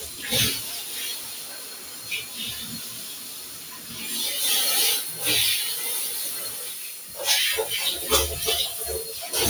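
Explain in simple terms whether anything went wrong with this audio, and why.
A noise suppressor meant for speech was left on this sound, treating steady parts as noise, so the level keeps pumping and thinning rather than staying even.

The sound is cut by the noise suppressor at 0.03–0.23, 0.82–0.97, 1.16–2.09 and 2.79–3.93 seconds. Held parts sink while sharp hits survive, and unlike a dropout, the sound never vanishes completely.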